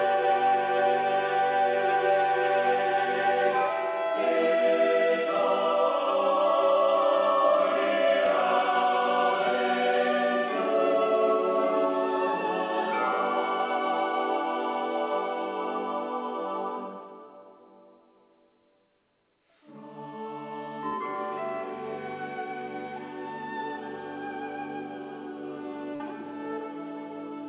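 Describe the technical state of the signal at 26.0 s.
At 26.0 s there is a short concealed packet loss, running from 25.96 to 26.02 s. About 40 ms of the stream never arrived in time. The receiver covered the gap by extending the preceding sound, then blended back into the real audio. The result is a brief smear or wobble. Any short transient in that window can be lost. The band stops at 4 kHz, which fits a narrowband G.711 call path.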